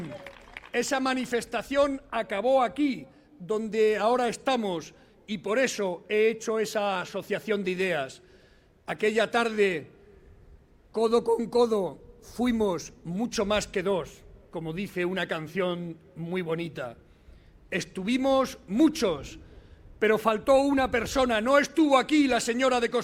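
Nothing goes wrong anywhere in this one; there's just no technical fault to point to at any moment.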